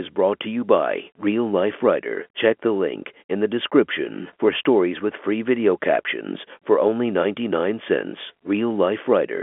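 No technical faults are audible.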